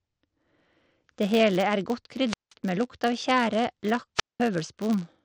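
Throughout the speech runs a 100 Hz buzz from a filter restarted on every block. Each block starts from silence instead of the previous block's state, leaving a small transient that repeats a hundred times a second, which points to blocks about 10 ms long. Unlike mains hum, this buzz rises and falls with the speech level and fades when the talker pauses, because the transients scale with the signal.

At 2.27 s, after "hele er godt", a wireless microphone squelch dropout begins. The FM signal fades, hiss swells briefly, then the receiver's squelch mutes the output for about 0.18 s before the speech returns with "med lukt av tjære" at 2.54 s. A second dropout follows "med lukt av tjære" from 4.16 to 4.41 s, with a mute of about 0.2 s. These differ from clean digital gaps because of the hiss that rises before each hole.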